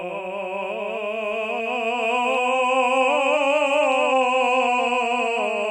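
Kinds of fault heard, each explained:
Doubled audio track: A second copy of the music runs throughout, trailing the original by roughly 300 ms. It is full-band and dry, with no decay or room colour, and sits about 5 dB below. The likely cause is a second capture path or an edit that left two copies out of step.
Adaptive stream at a lower bitrate: At 2.46 s the quality drops suddenly with no gap and stays low to the end. Nothing remains above 11.2 kHz, and codec artefacts rise. This fits a switch from a 128 kbit/s MP3 to a 48 kbit/s version.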